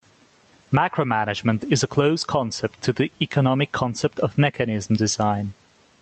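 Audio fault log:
Throughout: gain pumping. The level swings by around 15 dB, so loud and soft syllables sit squashed closer in level. This is likely from gain set far too high for the microphone, with a fast limiter or compressor clamping down on each loud sound. On a waveform, the peaks look flattened. A spectrogram shows little energy above an 8 kHz call-codec cutoff.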